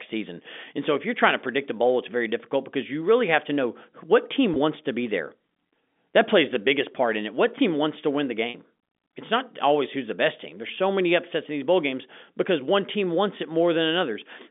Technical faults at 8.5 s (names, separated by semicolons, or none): packet loss with pitch repetition